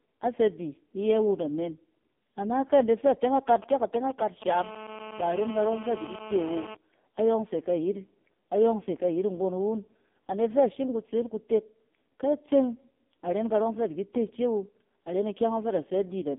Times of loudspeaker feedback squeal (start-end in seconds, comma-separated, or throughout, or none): none